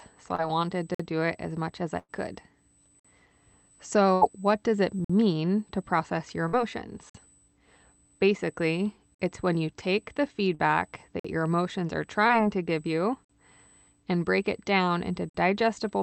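A steady USB whine at 8 kHz runs under the whole clip, roughly 35 dB below the speech. It is bus current leaking into the audio path.

At 0.35 s comes a short concealed packet loss. About 20 ms never arrived, and the decoder stretched the last sound over it. It is heard as a brief smear.

At 0.95 s a gap between chunks cuts in. The audio arrives in 2-second chunks with a 50 ms silence at each join.

At 1.99 s a burst of packet loss removes about 100 ms. The last sound is held, fades, and ends in silence before speech resumes further on.

The next chunk gap falls at 3.0 s.

At 4.14 s a second burst drops about 80 ms. It is heard as a held, fading sound and a jump ahead.

Further chunk gaps fall at 5.05 s and 7.1 s. Another short concealed loss at 6.48 s wobbles about 40 ms.

A chunk gap falls at 9.15 s. Another short concealed loss comes at 10.55 s, right after "when you take the", smearing about 40 ms.

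A chunk gap falls at 11.2 s. A short concealed loss at 12.28 s gives a brief smear.

The last chunk gaps fall at 13.25 s, after "to give you", and at 15.3 s, after "break it down into".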